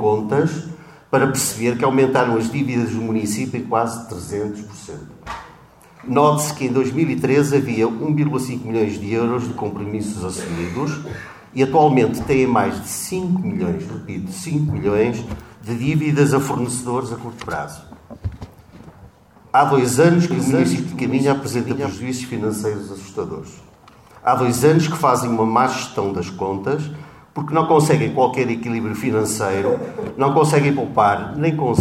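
From 20.31 to 21.93 s a doubled audio track appears: a full-band copy, roughly 10 dB quieter, trails about half a second behind, likely from a slower second capture path. On a spectrogram the same patterns repeat, fainter and offset, starting and stopping abruptly.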